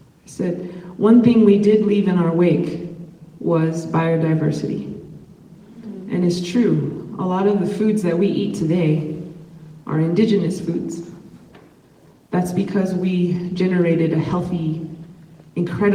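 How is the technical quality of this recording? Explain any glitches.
No technical faults are audible.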